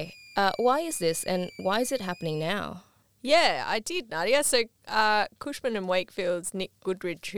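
From the start of the clip to 2.5 s, a thin, high whistle sits under the speech, roughly 25 dB below it. Its pitch wanders between about 2.3 and 2.6 kHz rather than holding steady. This is switching supply whistle: a switching power supply in the recording chain was running in an audible burst mode or beating against another supply, and its shifting frequency tracked changes in load.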